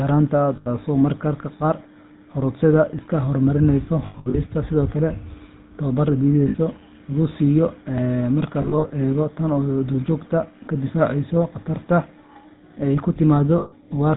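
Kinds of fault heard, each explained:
GSM full-rate codec: Throughout, the speech carries a plainly audible buzzy, gravelly roughness and nothing above 4 kHz. The vocal tract is modelled and excited by sparse regular pulses at 13 kbps, so fine detail is replaced by coarse buzz.
Lost GSM frames: At 0.56–0.67 s, 4.06–4.37 s, 6.48–6.55 s, 8.62–8.91 s and 13.58–13.73 s, the sound freezes into a rough metallic ring as the last good frame repeats. The second and fourth are scattered dropouts over about 280 ms.
Audio missing between chunks: At 2.99 s a tiny skip of a few milliseconds is heard, with the two sides butted together without silence. It is likely a piece lost while a recording or processing chunk closed and the next opened.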